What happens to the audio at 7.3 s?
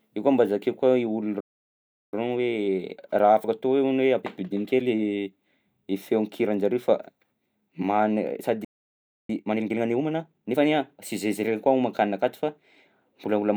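Nothing goes wrong at 7.3 s: the speech carries on intact through that moment, with no dropout, click, distortion or other fault.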